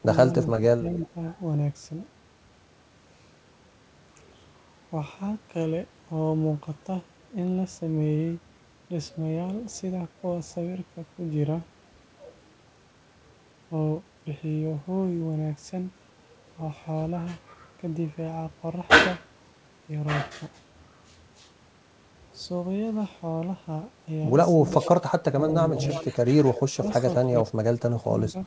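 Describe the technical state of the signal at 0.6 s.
The echo canceller most likely failed to separate the local talker from loudspeaker echo while both sides spoke, so it turned the speech down. This speech suppressed in double talk runs from 0.05 to 1.16 s, dipping around 10 dB at its deepest, with roughly a third of a second affected in pieces.

Just before 0.6 s, from 0.52 to 0.56 s, an echo leak slips through, likely because the far end's canceller left some loudspeaker pickup in its microphone signal. It is a brief, faint copy of the voice delayed by 315 ms, roughly 20 dB below the speech.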